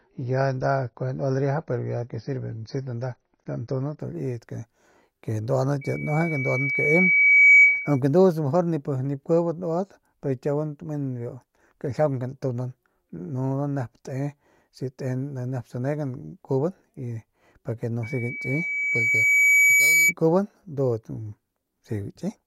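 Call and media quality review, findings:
Dull, band-limited start, 0.0–4.0 s, nothing above 6.6 kHz, then a sudden clean step up with no gap. An adaptive stream starting at a low bitrate, consistent with roughly 24 kbit/s AAC before switching higher.

Loudspeaker feedback squeal, 5.81–8.00 s and 18.03–20.13 s: a single 2.3 kHz tone swelling over one to two seconds to well above the speech. The mic picks up its own speaker, and loop gain exceeds unity at that frequency.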